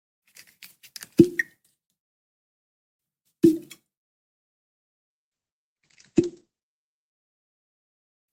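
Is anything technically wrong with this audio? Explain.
Yes. From 5.10 to 7.10 s, an adaptive stream at a lower bitrate takes over: the connection slows and the player switches to a cheaper encoding, which fits a drop from about 64 to 12 kbit/s Opus. Treble vanishes above 9 kHz, artefacts thicken, and quality shifts abruptly without any gap.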